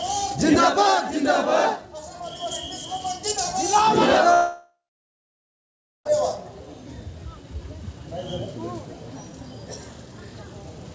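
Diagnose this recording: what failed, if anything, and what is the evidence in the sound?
Long network dropout, 4.34 to 6.07 s, at the network stage, likely lost packets. The G.722 call path, with nothing above 8 kHz, stretches the last sound into a fading buzz, then 1.3 s of silence follows before audio resumes, with 1.72 s missing.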